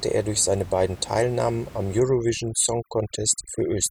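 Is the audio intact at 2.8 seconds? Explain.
No. From 2.0 s to the end, the background drops and breaks up into twinkling specks: overdone noise removal. The noise reducer pushed individual frequency bands down whenever they sat close to the room noise (about 19 dB below the speech), taking quieter parts of the voice with them.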